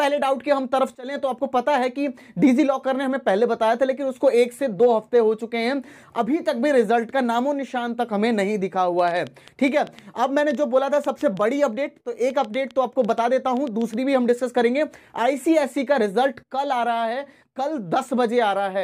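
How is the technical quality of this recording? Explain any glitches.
There's one real glitch. From 8.99 to 13.95 s a train of clicks runs over the sound, about 30 of them at roughly 5.7 per second but unevenly spaced, each similar in shape and peaking about as loud as the audio itself. They tick through quiet moments too, which points to a likely outside source, like nearby equipment interference or a faulty connection or power supply, rather than anything in the sound itself.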